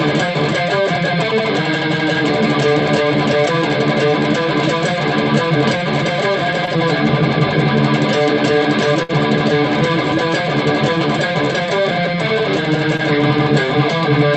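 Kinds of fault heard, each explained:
Short concealed packet loss: A brief smear or wobble at 6.65 s and again at 12.97 s, each lasting a few hundredths of a second. About 20 ms of audio arrived too late, so the receiver bridged the hole by extending the preceding sound.
Burst of packet loss: At 9.03 s the sound becomes a held, fading continuation for about 60 ms, then picks up further on with a piece gone. About 60 ms of consecutive audio was lost, and the receiver stretched the last sound while turning it down.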